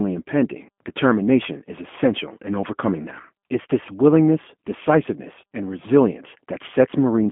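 Rough, slightly synthetic speech with nothing above about 3.5 kHz throughout: G.729 coding at 8 kbit/s over a 200 to 3400 Hz phone line, with pulse-modelled excitation replacing the real waveform.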